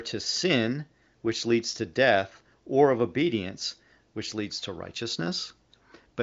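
Nothing goes wrong here at all: the speech just comes across the way an AMR wideband (HD Voice) call does at a high setting, with nothing above 7.6 kHz, at a rate of about 23 kbit/s.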